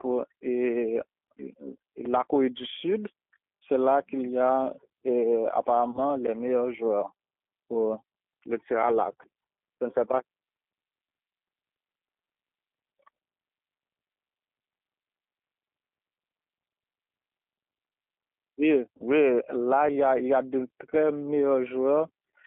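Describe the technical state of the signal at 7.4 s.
At 7.4 s the speech carries G.729 codec damage, as it does for the whole clip. The codec rebuilds each 10 ms frame from a vocal tract filter, a pitch predictor and a few pulses, which fits a rate of about 8 kbit/s, so the voice sounds rough, buzzy and slightly synthetic. On a spectrogram the energy sits inside a band from 200 Hz to 3.5 kHz, with a hard empty ceiling above it and smeared harmonic detail.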